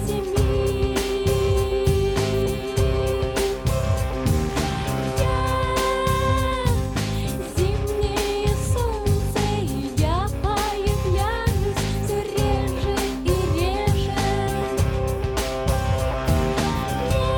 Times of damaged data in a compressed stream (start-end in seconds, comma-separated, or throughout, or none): 17.10